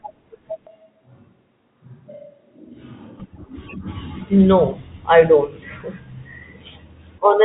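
From 0.67 to 3.20 s the speech turns suddenly hollow and roomy, drops about 10 dB and gains background noise, then snaps back: likely a switch to a distant microphone. Unlike a plain gain dip, it adds reverberation, while the telephone band limit stays constant.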